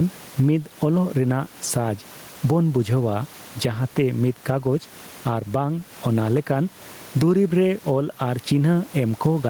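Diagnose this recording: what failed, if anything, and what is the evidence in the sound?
Gain pumping in call processing throughout: gain swings around 15 dB, pulled down on loud speech; likely overdriven input feeding a fast limiter.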